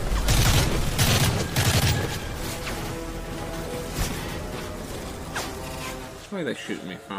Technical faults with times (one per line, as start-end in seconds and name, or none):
1.12-1.16 repeated frames
2.83-2.90 repeated frames
4.27-4.37 repeated frames
5.67-5.81 repeated frames